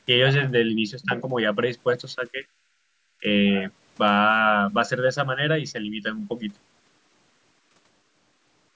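At 1.05 s the speech dips sharply for about 50 ms, by around 10 dB, then recovers. From 2.15 to 2.45 s it sags more gently, by a few decibels. At 3.2 s a short drop of roughly 15 dB lasts about 60 ms. The pattern points to speech suppressed in double talk as the likely cause: with both ends active, the echo canceller could not tell the near talker from loudspeaker echo and attenuated the microphone signal along with it.

Between 2.73 and 2.92 s the room tone falls away by about 13 dB and then returns. This is background gated by the echo canceller, which clamped the microphone while the far-end loudspeaker was playing and released it roughly 200 ms later, leaving a brief hole in the ambience.

The audio has passed through call microphone processing, with nothing above 8 kHz.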